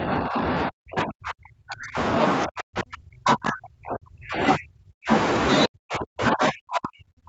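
The echo canceller most likely could not tell the talker from loudspeaker echo while both sides spoke at once, so it turned the speech down with it. This is speech suppressed in double talk. From 0.0 to 1.97 s, from 2.46 to 5.1 s, and from 5.66 s to the end, the speech sinks by as much as about 40 dB, thinning and breaking into pieces, with brief recoveries between the spans. The call microphone processing leaves nothing above 8 kHz.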